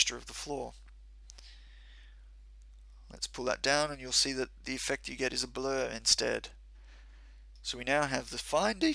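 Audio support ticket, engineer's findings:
No faults found on a full listen, nothing to chase on this one.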